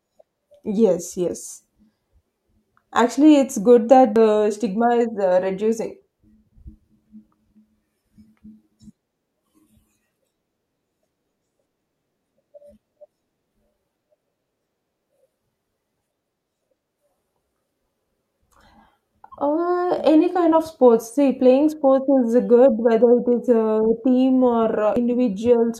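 At 4.16 s the speech jumps forward, and it happens again from 24.87 to 24.96 s. Both are compressed frames skipped: a few frames of the coded stream never get decoded, so roughly a tenth of a second of audio just goes missing each time, and the speech lurches ahead.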